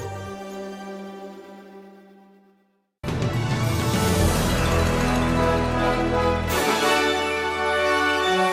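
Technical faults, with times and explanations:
No technical faults can be heard in this clip.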